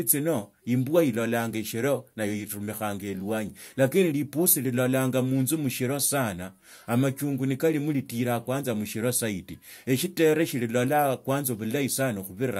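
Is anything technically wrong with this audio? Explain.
No, the signal shows no technical faults anywhere in the recording.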